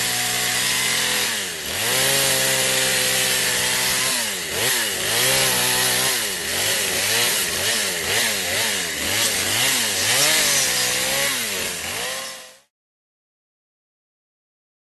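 No technical faults are audible.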